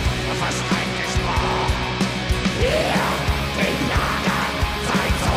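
No technical faults are audible.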